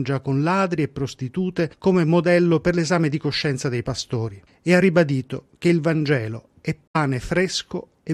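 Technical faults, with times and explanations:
6.88–6.96 s, corrupt frame muted: the speech drops abruptly into a hole of about 86 ms, which fits three compressed frames of a little under 30 ms each. Damaged bits made the decoder reject those frames, and the player filled the gap with silence. The speech resumes on schedule, with no time lost. On a waveform this looks like a flat line with hard edges. On a spectrogram it appears as a vertical blank band across all frequencies.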